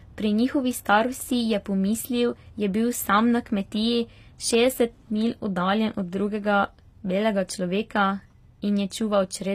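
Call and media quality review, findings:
HE-AAC compression, throughout: gritty, metallic s sounds, nothing above 15.5 kHz. Likely HE-AAC v2 near 24 kbps, with treble rebuilt from copied lower bands.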